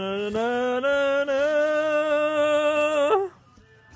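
No faults can be heard anywhere in the clip.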